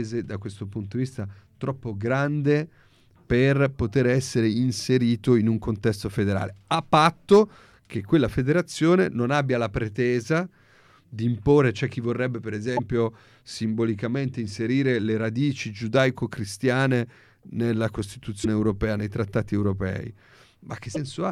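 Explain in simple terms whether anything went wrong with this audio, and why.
Three brief glitches break the speech, a short chirp or dropout at 12.76 to 12.79 s right after "c'è chi vorrebbe per", at 18.43 to 18.46 s just before "europea nei trattati europei", and at 20.94 to 20.97 s. This is likely a broken MP3 bit reservoir: missing frames left the next one reading leftover data.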